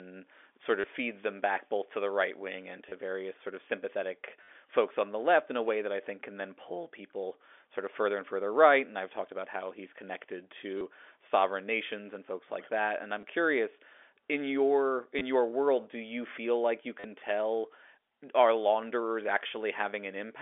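Packet loss with last packet repeated hits the speech at 0.81, 2.89, 4.43, 10.78, 13.21, 15.19 and 17.0 s. Gaps of 20 to 50 ms are filled by replaying the last packet, causing robotic stutters with a 100 Hz buzz that suggests 10 ms packets.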